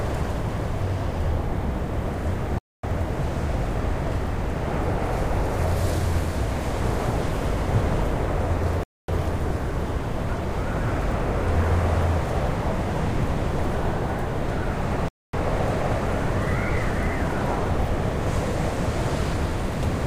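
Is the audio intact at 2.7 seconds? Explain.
No. At 2.7 seconds the sound drops into a hard-edged hole of silence lasting 250 ms, from 2.58 to 2.83 s. This is a gap between chunks: the audio arrived in roughly 6-second pieces, and playback paused at the join before resuming, though nothing was lost.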